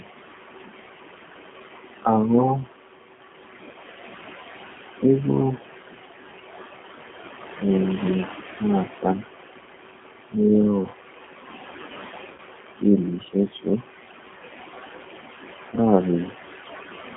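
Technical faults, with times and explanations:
Throughout, noise suppressor artifacts: the room noise, sitting about 16 dB below the speech, is pulled down by about 15 dB in the gaps and rises again under the speech. On a spectrogram the noise floor pumps between speech segments, with isolated residual specks twinkling in the gaps.
Throughout, G.729 codec: the speech is rebuilt from a vocal tract filter, a pitch predictor and a few pulses per frame, so it sounds plainly rough and synthetic. It fits an 8 kbit/s G.729A stream. A spectrogram shows energy confined to roughly 200 Hz to 3.4 kHz, with smeared, blocky harmonics.
3.17–3.20, 12.33–12.40 and 15.76–15.80, VoIP packet loss concealed by the speech codec: the decoder extends its last pitch and filter into a brief fading sound. The 10 ms gaps fit single lost frames, and the 12.33 s one fits about five. On the waveform each appears as a repetitive, decaying stretch, and after 12.40 the speech stays weak.
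13.51–13.68, speech cut by the noise suppressor: the suppressor mistakes part of the speech for noise and turns it down by up to about 17 dB over roughly 150 ms, so the sound is swallowed and faint. The waveform envelope dips abruptly, and the spectrogram shows a hole across the speech bands.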